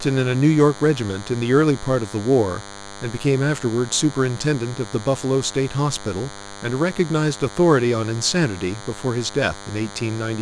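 DECT cordless phone buzz runs through the whole speech clip, from the first second to the last. A DECT handset or base station close to the recording chain emits a brief radio burst every 10 ms, and some stage of the audio circuitry rectifies that burst into a signal, so a 100 Hz tone with a dense stack of harmonics rides under everything. It comes across as a thin, steady, edgy buzz, roughly 20 dB below the speech.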